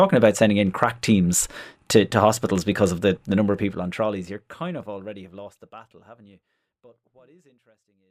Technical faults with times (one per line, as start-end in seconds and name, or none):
none